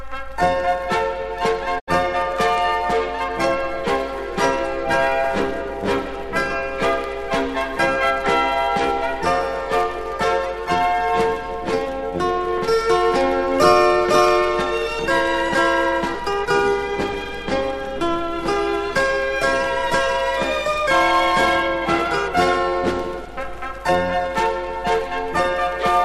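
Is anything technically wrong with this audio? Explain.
Yes. From 1.78 to 1.89 s the sound dips through a quick 20 ms fade into a brief silent hole, then resumes: a digital broadcast dropout, where the receiver muted after failed frames, losing about 72 ms, consistent with roughly three frames.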